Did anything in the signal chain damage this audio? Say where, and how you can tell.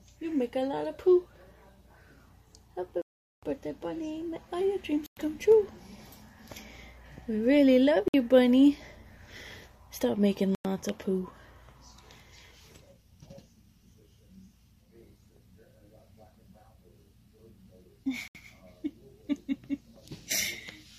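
Yes. Five gaps of true silence point to a Bluetooth stall at the wireless playback link: 3.02 to 3.43 s (about 0.41 s), 5.06 to 5.17 s, 8.08 to 8.14 s, 10.55 to 10.65 s and 18.28 to 18.35 s. The most likely cause is radio interference that delayed packets until the headphone buffer emptied. The sound stops dead and resumes cleanly, with no stutter or repeated fragment, which separates it from a dropout with concealment.

A single sharp click at 8.38 s is most likely dropped samples in the driver or buffer stage, with only a couple of samples missing, far under a millisecond. The waveform jumps straight to a later value, which leaves a thin vertical line across the spectrum. Unlike the stalls just before it, nothing audible is lost. There is only the click, with no gap.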